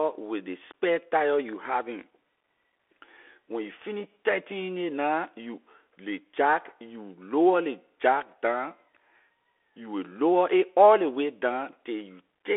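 Bluetooth CVSD headset codec throughout: adaptive one-bit delta coding narrows the speech to 300 Hz–3.4 kHz, nothing above 3.8 kHz, leaving scratchy sibilants and granular hiss.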